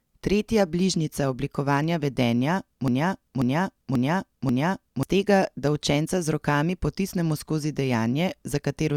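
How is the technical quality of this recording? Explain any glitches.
The recording has one clear glitch. From 2.88 to 5.03 s, a broken-record loop repeats a 0.54 s speech fragment four times, likely from a stalled stream; the waveform shows identical blocks, losing the missing audio.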